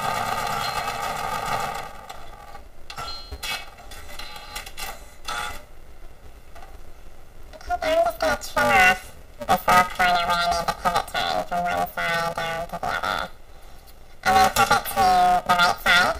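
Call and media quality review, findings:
Planar audio read as interleaved, whole clip. Symptom: constant robotic buzz at about 345 Hz, no clear octave shift. Component: probable decode or mixer stage handing planar buffers to an interleaved reader. Mechanism: each 2.9 ms block replays left-then-right at double speed, which fits a 128-sample block. Spectrogram: harmonic comb spaced 345 Hz across the band. Waveform: chopped 2.9 ms segments.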